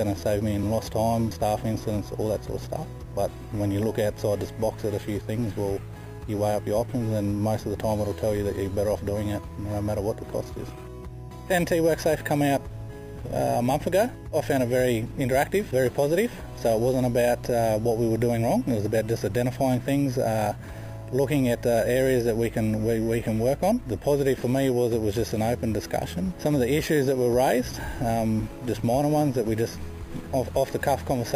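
Throughout, the sound shows imaging from sample-and-hold upsampling. Raised from 11 kHz to 44.1 kHz by unfiltered sample repetition, it carries mirrored copies about 21 dB down, the first between 5.5 and 11 kHz. Unlike hiss, this metallic fizz follows the sound's level and moves against its pitch.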